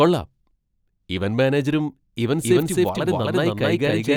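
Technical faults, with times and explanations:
2.44 s to the end, doubled audio track: right after "ഇവന്റ് മാനേജരും ഇവന്റ്", a second full-band copy of the speech enters abruptly, trailing the original by roughly 0.3 s at about the same level, so every syllable is heard twice. This likely comes from the signal being captured again through a slower path. Unlike room echo or reverb, the repeat happens once, with no decay, no room colour and no tapering tail.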